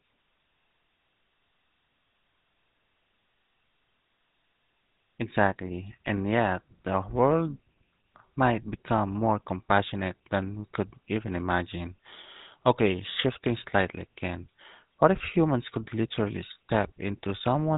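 A buzzy, gravelly roughness runs through the whole speech recording, with nothing above about 3.8 kHz. This is the GSM full-rate codec, consistent with 13 kbps. It models the vocal tract and excites it with sparse, regularly spaced pulses, plainly audible here.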